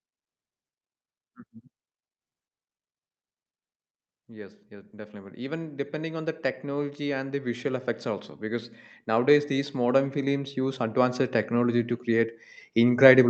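At 4.26 s the level begins to climb, and it keeps climbing until the clip ends at 13.30 s. This is automatic gain rising. The gain control judged the speech too quiet and pushed its gain up step by step. Nothing in the signal itself got louder. Because the whole input is scaled, the background swells along with the voice. The call codec's band limit, near 8 kHz, stays steady throughout.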